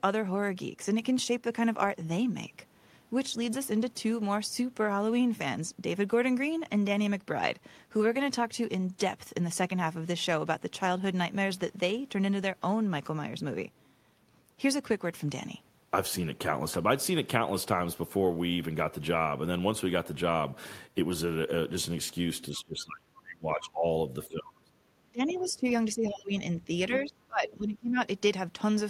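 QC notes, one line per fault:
22.51–27.97 s, speech suppressed in double talk: the voice ducks hard at 22.51–23.84, 24.27–24.72, 25.09–25.65, 25.95–26.34 and 26.89–27.97 s, dropping by about 20 to 30 dB. Likely the echo canceller was confused by both sides talking and pulled everything down.
22.55–26.97 s, other side's voice leaking through: brief scraps of a second voice at 22.55–22.59, 25.29–25.52 and 26.93–26.97 s, about 15 to 25 dB under the main speech. That's likely loudspeaker playback the echo canceller didn't fully remove.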